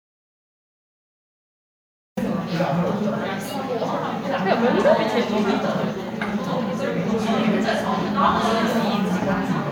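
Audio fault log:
0.00–2.17 s: audio dropout to silence, already under way when the clip opens. The first 2.17 s are silent with no room tone, then the sound enters abruptly mid-flow. Likely the input was lost or muted while recording carried on writing silence.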